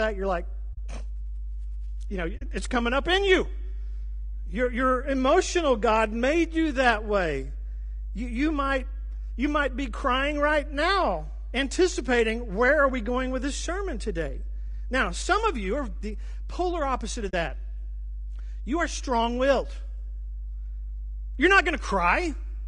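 From the first second to the end, a steady mains hum sits under the speech at 50 Hz, strong at about 10 dB below the talker. It is a steady low tone with some low harmonics from power-line coupling, and it does not change with the speech.

Throughout, the speech also sounds rough and grainy, with noise filling the gaps between harmonics and a thin, artificial top band. This is likely low-delay AAC compression (AAC-ELD) at 32 kbps, whose short frames cannot resolve pitch harmonics cleanly.

Three AAC frame losses with muting follow: at 0.73 to 0.78 s after "you're like", at 2.37 to 2.42 s between "you know" and "it's coming up in", and at 17.29 to 17.34 s after "the polar opposite of". Each is a brief 40 ms hole, which fits two lost frames whose spectrum the decoder set to zero. The sound fades out and back in softly over the overlapping windows, so the gap has soft edges, unlike a hard dropout.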